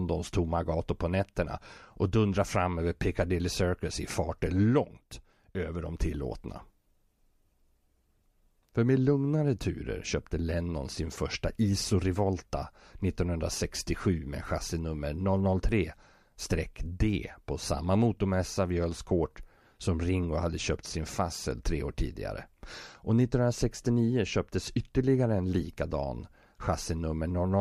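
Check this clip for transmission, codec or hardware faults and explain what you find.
Nothing stood out on listening to this speech recording; no transmission, codec or hardware problem could be heard at any point.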